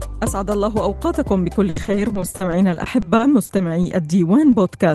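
Repeated packet loss (robotic sound) runs from 1.69 to 3.93 s: about twenty dropouts, the longest 70 ms, are each patched by stretching the previous sound, leaving a choppy texture with pieces missing. Short concealed packet loss at 4.51 s fills a 20 ms hole by continuing the preceding sound, heard as a brief smear before the real audio resumes.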